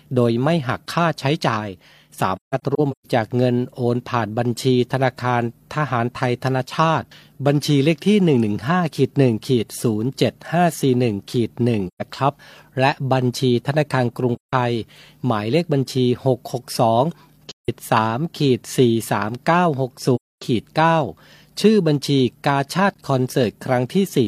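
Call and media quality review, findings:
AAC frame loss with muting at 2.35–3.07 s (scattered dropouts, longest around 150 ms), 11.88–12.02 s, 14.35–14.53 s, 17.49–17.69 s and 20.15–20.42 s. Decoder zeroes lost frames; overlapping windows fade the speech into soft holes.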